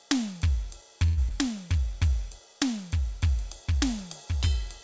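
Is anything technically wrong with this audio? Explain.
Yes, this music has two brief faults, heard through a call path whose G.722 coding leaves nothing above 8 kHz.

From 1.06 to 1.19 s a call audio freeze stretches the last sound into a fading buzz, likely from delayed packets draining the jitter buffer. It inserts about 109 ms, and the music then resumes without loss. A spectrogram shows a smeared, steady band.

At 1.29 to 1.32 s, short concealed packet loss drops about 20 ms, which is patched by extrapolation into a quick smear or wobble. It looks like a small blurred patch in the spectrogram.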